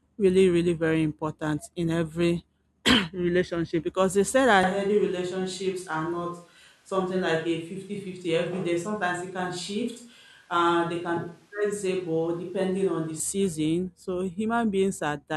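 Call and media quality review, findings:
Switch to a distant microphone, 4.63 to 13.20 s. Speech abruptly turns roomy, hollow and thin in the bass, then snaps back. Level roughly unchanged. Room noise about 35 dB below speech. Likely the close-mic feed dropped and a far mic took over.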